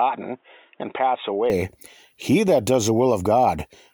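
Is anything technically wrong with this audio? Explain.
Yes. From 0.0 to 1.5 s the speech is band-limited, with nothing above 3.8 kHz, about 5 dB quieter, and carries a faint noise floor roughly 40 dB down. It then clears abruptly, with no gap. This points to an input switched to a poorer device, likely a narrower-band microphone or headset path, before returning to the full-range input.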